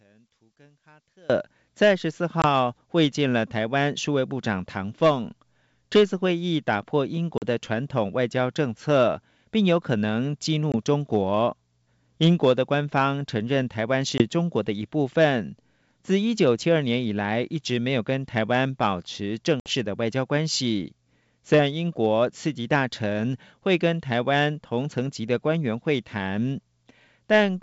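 From 0.0 to 1.30 s the centred speech almost vanishes, dropping about 32 dB. The likely cause is one channel inverted, cancelling common content in mono. Packet loss on an ADPCM call follows, over the G.722 wideband path: hard-edged holes at 2.42 s, 7.38 s, 10.72 s, 14.18 s and 19.60 s. They last 20, 40, 20, 20 and 60 ms. Speech returns slightly distorted as the decoder's predictor resynchronises.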